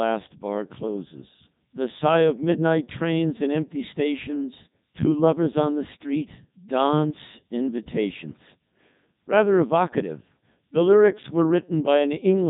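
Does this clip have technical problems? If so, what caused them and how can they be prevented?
Yes. Across the whole clip the speech sounds robotic and buzzy, with a synthetic quality and nothing above about 3.8 kHz. This is the Codec 2 vocoder at work. Rather than keeping the waveform, it transmits only pitch, voicing, energy and a coarse spectral envelope, and the decoder rebuilds the voice from sine waves, so natural texture is lost. The heavy damage fits its top 3.2 kbit/s mode. To prevent it, record or transmit through a waveform codec at a higher bitrate instead of a low-rate radio vocoder.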